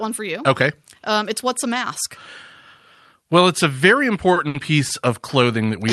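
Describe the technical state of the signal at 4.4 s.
Right around 4.4 s there are two short stalls from a late packet, from 4.33 to 4.39 s and from 4.48 to 4.57 s. Each time the jitter buffer ran dry, so the last sound was stretched, by 30 ms and then 60 ms, and playback resumed where it had stopped. Unlike a lost packet, no sound is missing. The timing just slips later, with a held, faintly buzzy sound.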